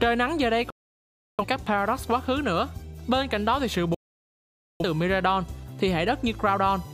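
The receiver twice lost the digital stream, or received frames that failed their checks, and muted until valid frames resumed. This is a digital broadcast dropout. The audio cuts out abruptly, with a fade of only about 3 ms, from 0.70 to 1.45 s and again from 3.94 to 4.84 s. Roughly 0.68 s and 0.85 s of programme are missing, consistent with runs of lost frames. The sound resumes mid-flow, with nothing filled in for the gaps.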